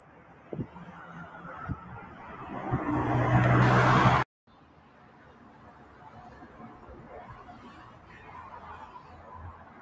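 From 0.00 to 0.49 s, the sound is cut by the noise suppressor, sinking by up to about 4 dB as sustained material is mistaken for noise and pulled down, so the opening sounds thinned before the level recovers.

Throughout the clip, a noise suppressor tuned for speech is applied to the sound, treating steady tones and decays as noise. Attenuation swings by roughly 15 dB, so held parts and tails sink and pump while attacks pass, all within a band that stops at 8 kHz from the call path.

From 4.47 to 6.01 s, the sound is again cut by the noise suppressor, dropping by up to about 5 dB for around a second and a half. Sustained content sinks and its decay is shortened while transients stay comparatively intact.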